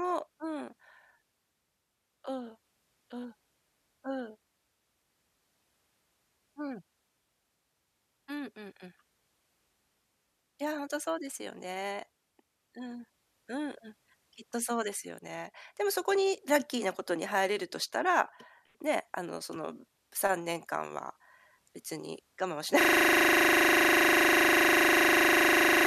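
At 22.81 s the speech locks into a system hang loop that runs to the end: a 40 ms slice of audio repeats exactly, about 25 times a second. That gives a buzzy, machine-gun stutter. The host or driver froze while the hardware kept replaying its ring buffer.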